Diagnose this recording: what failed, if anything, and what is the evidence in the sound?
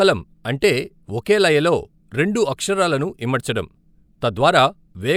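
Nothing in the speech recording points to a failure at any stage of the chain, from the analogue input through conversion, processing and transport to playback.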